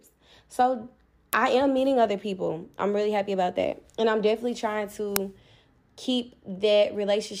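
At 1.33 s, just before "I am meeting other", there's a loud crack lasting about 0.67 ms. That's an uninitialised buffer: a block went out to playback before any audio was written into it, so leftover memory got played as samples. Its length fits a 32-sample buffer. At 5.16 s, right after "I'm definitely trying", it happens again as a longer 2.67 ms burst, which fits a 128-sample block.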